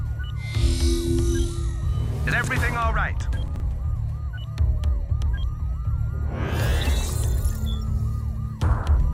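At 2.32 to 2.48 s and again at 3.48 to 3.6 s, chunks out of order: a 40 ms block plays three, then two, blocks late. Nothing is missing, but the misplaced segment leaves a brief jumbled stutter at three hard joins.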